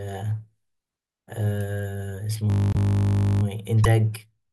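Speech runs through a system hang loop from 2.5 to 3.43 s. Playback freezes on one 20 ms fragment and repeats it 56 times, so the voice becomes a steady 50 Hz buzz, then picks up again with essentially nothing skipped. On a spectrogram this shows as evenly spaced horizontal lines at multiples of 50 Hz, with identical vertical stripes every 20 ms. The waveform shows one short shape copied end to end. Two brief glitches follow, at 2.73–2.76 s, inside the looped stretch, and at 3.83–3.86 s. In each, the audio lurches forward and a chirp, noise burst or short hole lasts roughly one to one and a half 24 ms frames. The likely cause is a broken MP3 bit reservoir: after frames went missing, the next frame reached back for borrowed bits and decoded bytes belonging to another frame. A spectrogram would show a narrow smudge of broadband or chirping energy, or a thin gap, that breaks the speech harmonics. 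In the waveform it appears as a short discontinuity.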